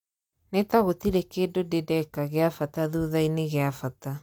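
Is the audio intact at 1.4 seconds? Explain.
Yes, the speech at 1.4 s plays through without any audible fault.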